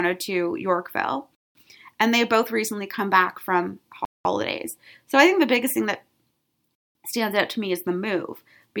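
Speech interrupted by a gap between chunks: 200 ms silent holes at 1.35, 4.05 and 6.75 s, joining 2.5 s segments, seen as flat, hard-edged blank columns.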